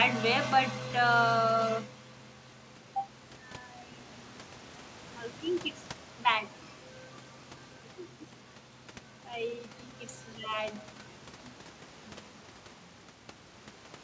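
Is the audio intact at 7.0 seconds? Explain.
Yes, the audio is intact at 7.0 seconds, with no fault at that moment.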